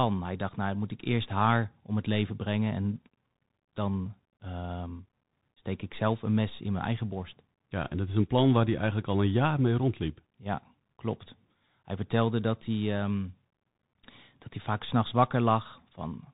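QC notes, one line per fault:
throughout: Bluetooth CVSD headset codec, one-bit delta modulation with adaptive step, cuts everything above 3.8 kHz and leaves plainly audible scratchy sibilants and granular hiss under speech.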